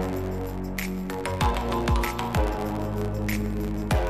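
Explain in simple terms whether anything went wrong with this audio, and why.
A steady buzz, a little under 92 times a second, runs through the whole clip, and the sound moves about 7 percent too fast. This is a block size mismatch (truncated): one stage hands over longer chunks (which fits 512-sample blocks) than the next accepts, and each chunk's tail is dropped.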